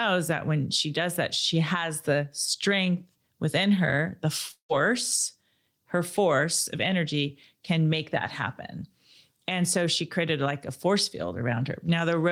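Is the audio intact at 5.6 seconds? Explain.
Yes, at 5.6 seconds the speech plays through cleanly, with no dropout, click, distortion or other fault at that moment.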